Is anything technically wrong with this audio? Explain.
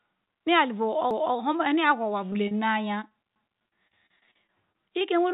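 Yes. This speech clip has three kinds of fault, heard through a call path whose bandwidth stops at 4 kHz, as a G.711 mu-law codec would leave it.

Overlapping chunks, at 1.11 to 1.36 s and again at 3.36 to 3.61 s: the audio was handled in blocks about 2 s long, each starting 250 ms before the previous one ended. At every join that quarter-second plays twice, giving an audible stutter.

Short concealed packet loss, at 2.31 s, 2.33 to 2.36 s and 2.48 to 2.52 s: gaps of 10, 20 and 30 ms arrived too late for the decoder. Each was patched by stretching the preceding sound, so these moments come across as brief smears or wobbles.

Repeated packet loss (robotic sound), from 3.09 s to the end: packets kept going missing throughout this stretch, each hole filled by continuing the last sound before the next arrived. The result is choppy speech with pieces missing.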